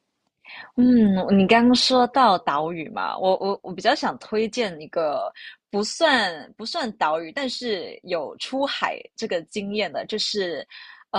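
No technical faults are audible anywhere in this speech recording.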